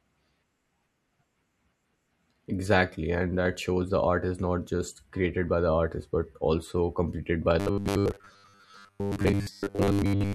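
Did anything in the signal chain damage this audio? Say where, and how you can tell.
Yes, at the driver buffer. From 7.60 s, after "but also completed by", speech becomes a rigid 100 Hz buzz. This is likely robotic sound from repeated 10 ms buffers.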